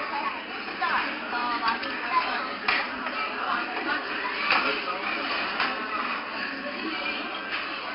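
The whole clip carries 4-bit ADPCM compression. Each sample is stored as a small 4-bit step away from a predicted value, with the step size adapting as the sound moves, and here the damage is heavy. You get a gritty hiss riding on every loud moment, and sharp attacks distort where the step can't grow fast enough. Nothing comes through above about 5.3 kHz, so it's dull too, which fits a low sample rate, with the bitrate around 44 kbps.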